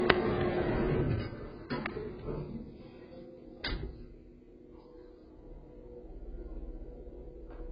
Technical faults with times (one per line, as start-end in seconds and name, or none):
0.00-7.72 AAC compression